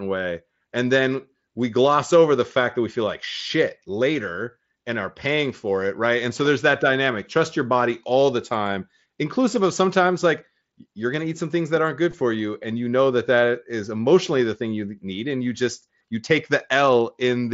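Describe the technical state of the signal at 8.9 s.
At 8.9 s the speech is intact, passing through the Bluetooth mSBC headset codec with no fault at that moment.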